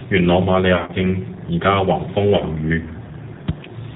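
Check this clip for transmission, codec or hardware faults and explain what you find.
Two faults are present: a low-bitrate speech codec throughout, and two brief packet-loss dropouts.

Throughout, the speech sounds rough, synthetic and dull, with nothing above 4 kHz. This is the G.729 codec at 8 kbit/s, rebuilding the voice from a vocal-tract model and a few pulses per frame.

From 0.74 to 1.01 s, between "元朗瑪利" and "依家", and again from 2.37 to 2.43 s, the voice is stretched into a buzzy tone or coloured noise that fades. This is VoIP packet loss concealed by the speech codec, which extrapolated from the last pitch and filter. In the first dropout, about 130 ms of audio was lost in gaps of up to 40 ms, scattered over 220 ms. The second dropout lost about 30 ms.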